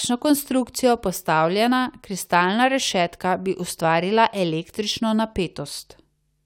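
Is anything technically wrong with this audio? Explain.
No, nothing technically wrong can be heard here.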